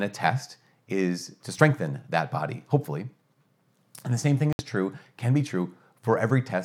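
At 4.53 s a digital broadcast dropout cuts into the speech, and the sound returns at 4.60 s. The receiver stopped getting usable data, or the frames arriving failed their error check, so it muted its output instead of playing corrupted audio. The gap lasts about 64 ms, which fits two lost frames, and whatever was transmitted during it is gone. On a waveform this shows as an abrupt flat line; a spectrogram shows a narrow, fully blank vertical band across all frequencies.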